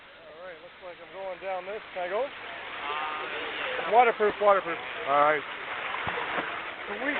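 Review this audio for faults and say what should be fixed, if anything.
No faults; nothing needs fixing.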